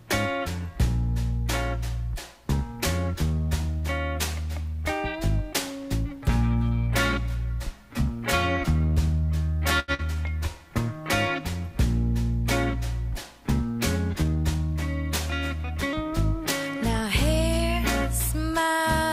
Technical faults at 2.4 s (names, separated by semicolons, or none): none